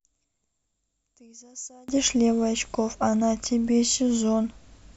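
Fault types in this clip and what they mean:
One channel inverted: From the start to about 1.88 s the speech sits about 27 dB lower than the rest, leaving only a faint residue. The likely cause is one stereo channel with reversed polarity, so the shared centred speech cancels when both channels are summed to mono. On a waveform the summed trace is nearly flat there. A spectrogram shows that stretch almost empty before full-strength energy returns.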